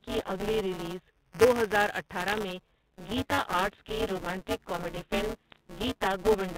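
Throughout the speech, the program filling the playback ring buffer and the hardware reading it have drifted into each other, so they cross inside every period. Most of each period replays audio about 15 ms old, with hard joins either side. The result is a steady robotic buzz at 188 Hz, which fits a 256-sample buffer, heard only while there is signal: buffer tearing.

From 2.28 to 2.36 s, and again from 5.51 to 5.58 s, bit errors on the digital phone line flip a small fraction of a percent of bits in the G.711 A-law stream. Each corrupted byte throws a single sample off, and hits on sign or high bits produce short bursts of sharp ticks and crackle over the speech.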